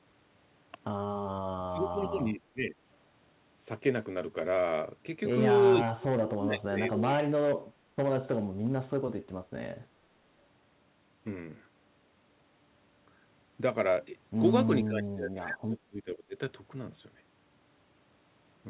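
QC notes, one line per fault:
1.6–2.75 s, 5.82–7.98 s and 14.84–16.36 s, speech suppressed in double talk: the speech dips hard, bottoming out somewhere around 20 to 30 dB down. Likely the echo canceller mistaking the talker for loudspeaker echo while the far end spoke, and pulling both down.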